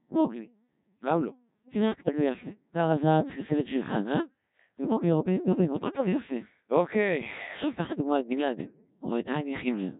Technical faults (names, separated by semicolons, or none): Codec 2 vocoder; bit errors on digital voice radio